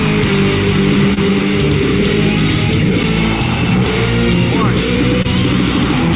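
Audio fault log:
1.14–1.18 s and 5.22–5.26 s, short concealed packet loss: each time about 20 ms of audio arrived too late, so the receiver extended the preceding sound and blended back, heard as a brief smear or wobble. Spectrograms show a smoothed, repeated patch; waveforms, duplicated cycles.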